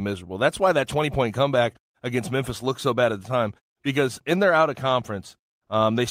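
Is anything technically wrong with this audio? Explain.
No, nothing in this speech recording points to a technical fault.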